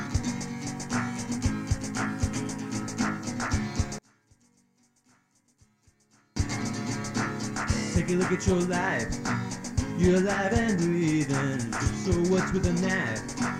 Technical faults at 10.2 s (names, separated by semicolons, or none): none